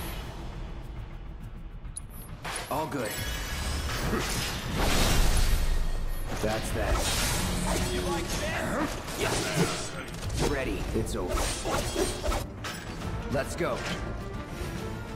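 At 10.47 s and 12.43 s, damaged data in a compressed stream makes the decoder lose frame sync, giving brief glitches heard as a chirp, squawk, click or short hole.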